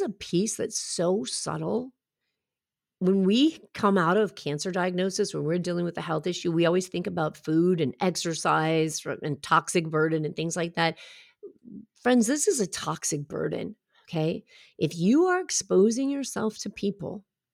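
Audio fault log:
Nothing stood out on listening to the speech in this recording.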